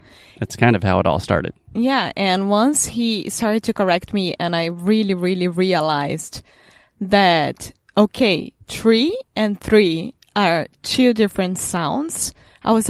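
No technical faults are audible anywhere in it.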